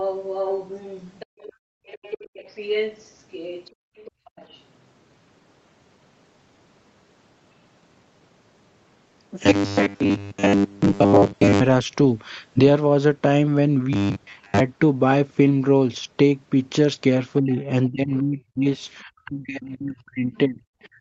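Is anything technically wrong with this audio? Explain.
Yes, four kinds of fault are audible.

Other side's voice leaking through: from 0.0 to 1.53 s and 1.86 to 4.61 s a second voice sits about 10 and about 15 dB under the talker. Faint scraps follow at 17.51 to 17.61 s and 20.83 to 20.87 s, about 30 and 40 dB down. The likely cause is loudspeaker playback that the echo canceller did not fully remove. Unlike gating, this adds sound rather than taking it away.

Background gated by the echo canceller: between 1.26 and 1.86 s, and again from 3.73 to 4.31 s, the room sound drops by about 37 and about 36 dB for roughly 0.5 and 0.4 s. The canceller clamped the microphone while the loudspeaker played. Only the background vanishes, which sets it apart from double-talk suppression.

Robotic sound from repeated short buffers: from 9.44 to 11.60 s and 13.93 to 14.60 s the sound turns into a rigid, metallic 100 Hz buzz that follows the speech only roughly. 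Most of the audio there is likely the same snippet replayed, which fits a 10 ms buffer. The fixed pitch distinguishes it from ordinary codec roughness.

Speech suppressed in double talk: from 17.41 to 18.67 s the talker dips by about 25 dB for roughly 0.7 s in total, and from 19.03 s to the end by about 30 dB. Both sides were likely speaking at once, and the canceller turned the talker down along with the echo. Here the talker's own voice weakens, not just the room.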